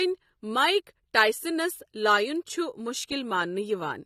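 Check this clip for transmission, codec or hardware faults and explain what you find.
One codec fault runs through the whole of this speech clip: AAC compression, likely AAC-LC at a low bitrate. The damage is plainly audible from start to finish. The encoder quantises each frame's frequency lines against a hearing model, and with too few bits to spend it discards the top of the spectrum and thins out detail below it. Nothing remains above 14.5 kHz, so the sound is dulled and smeared, with a fizzy, warbling edge on sibilants, which fits a bitrate around 32 kbps.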